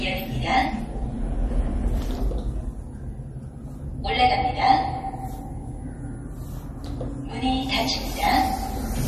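From start to finish the whole thing carries clearly audible damage that most likely comes from MP3 compression at a starved bitrate, something in the region of 38 kbps judging by how rough it gets. The top end stops dead at 13 kHz, where the encoder chopped off the treble to save bits. Below that, weaker detail flickers in and out between frames, so the sound takes on that watery, swirly texture and sharp onsets lose their edge.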